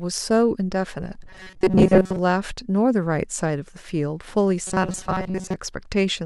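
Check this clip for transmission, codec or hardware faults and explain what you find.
Twice in this speech clip, from 1.23 to 2.19 s and again from 4.67 to 5.56 s, the voice collapses into a rigid metallic buzz near 188 Hz that only loosely tracks the speech. This is robotic sound from repeated short buffers, likely caused by audio arriving too slowly, so the player kept looping its last fragment for most of each stretch. A 188 Hz buzz points to a loop about 5.3 ms long.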